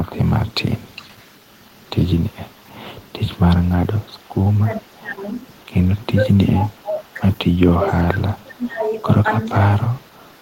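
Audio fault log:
0.23–7.79 s and 8.32–10.41 s, echo leak: a faint copy of the speech trails it by 414 ms, sitting around 35 dB below the direct sound. This is likely a far-end loudspeaker whose echo canceller misses some of what its mic picks up, so that leftover comes back down the line.
4.76–5.24 s, 6.17–7.19 s, 7.80–8.86 s and 9.51–9.87 s, speech suppressed in double talk: the speech ducks by up to roughly 20 dB for stretches from under half a second to about a second. This is likely both sides talking at once, with the echo canceller unable to separate the local talker from the returning echo and turning both down.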